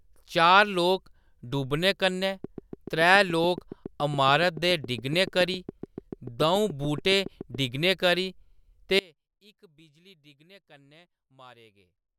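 A speech recording of about 12 seconds has two faults. Something, likely interference from nearby equipment or a faulty connection or power supply, injects a regular pulse into the signal, producing a train of clicks from 2.44 to 7.56 s. The clicks come at about 7.1 per second, around forty in all, peaking a few dB above the speech. They start after "लोक डूबने कन्नै" and end before "डिग्गने करी". At 8.99 s the wanted signal is likely lost while the path after the break stays live, giving an audio dropout to a faint residue. The speech cuts off abruptly, and only a faint sound roughly 30 dB down remains until the clip ends.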